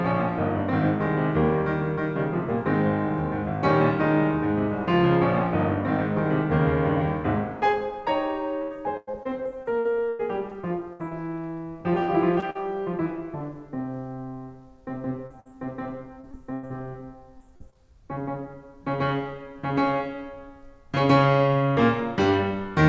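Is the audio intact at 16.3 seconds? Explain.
No. Repeated packet loss (robotic sound) runs from 16.21 to 16.72 s. Four gaps, the longest 98 ms, are patched by stretching the preceding music, so about a third of that span is synthetic. The music turns choppy, with fragments missing.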